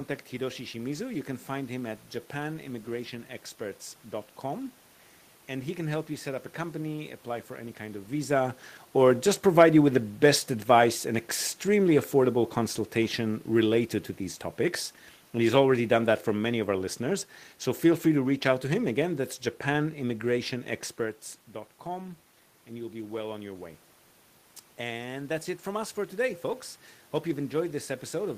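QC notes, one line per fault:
21.89 to 28.37 s, automatic gain rising: the talker moves off around 21 s and the input drops about 11 dB, so the AGC ramps up and voice and room noise swell together.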